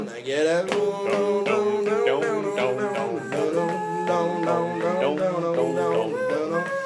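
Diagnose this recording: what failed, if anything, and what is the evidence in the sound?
Nothing failed, and there is no evidence in the sound of any fault.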